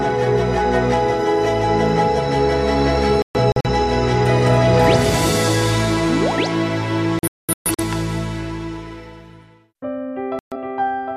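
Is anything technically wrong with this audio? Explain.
Yes. Digital broadcast dropouts at 3.22–3.69 s, 7.19–7.84 s and 10.39–10.55 s: the receiver lost its digital signal and muted until good frames returned, leaving short silent holes where the sound is simply gone.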